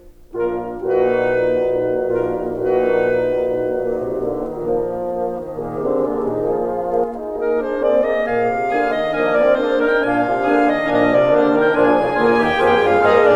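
From 2.10 s to 7.04 s the music carries a doubled audio track: a second, full-band copy runs about two seconds behind the original at roughly the same level, likely because the signal was captured again through a slower path or an edit left two copies out of step. Unlike an echo or reverb, the copy never decays or takes on room colour, and it cuts in and out abruptly at those boundaries.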